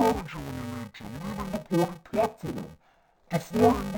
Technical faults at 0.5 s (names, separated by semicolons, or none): interleaved audio read as planar